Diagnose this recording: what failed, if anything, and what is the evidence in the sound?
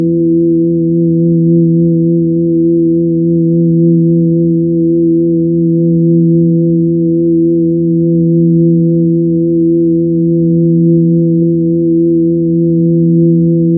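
Nothing failed here: the everyday sounds come across steady and intact, with no stage of the chain leaving any mark worth chasing.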